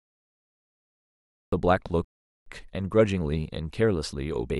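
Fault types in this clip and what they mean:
Cut-off start: The clip opens with digital silence until 1.52 s, where the speech begins abruptly mid-sound with no natural attack or fade-in. The recording or stream started late, so the beginning of that sound was never captured.
Rebuffering stall: From 2.05 s to 2.46 s the speech drops to silence, then picks up exactly where it stopped, adding 0.42 s with nothing lost. The player exhausted its downloaded audio and paused until more data arrived.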